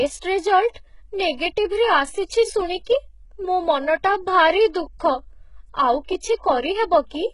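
From the start and throughout, the speech carries heavy codec damage, with nothing above 11.1 kHz. The upper band sounds rebuilt rather than captured: treble copied up from lower frequencies and shaped only by a coarse envelope, so its harmonics don't line up with those below the crossover, and s sounds come out gritty and metallic. This is likely HE-AAC compression, the v2 variant, at a very low bitrate in the region of 12 kbps.

At 0.73 to 0.76 s there is pre-echo: a short hiss spreads about 27 ms ahead of a sharp attack, which itself sounds softened and smeared. The transform coder spread its quantisation noise across the whole block, so noise scaled for the loud onset also filled the quiet moment just before it.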